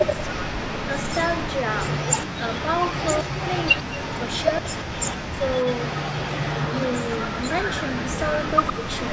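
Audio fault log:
Throughout, echo leak: a delayed copy of the speech follows it about 111 ms behind, sitting around 10 dB below the direct sound. This is likely a loudspeaker-side echo canceller letting part of the far end's own voice return down the line.
2.30–2.41 s, 3.23–3.35 s, 3.81–4.01 s, 4.61–4.66 s and 8.74–8.81 s, speech suppressed in double talk: the speech briefly drops away, by roughly 35, 25, 40, 20 and 10 dB. The likely cause is the echo canceller mistaking overlapping talk for echo and attenuating it.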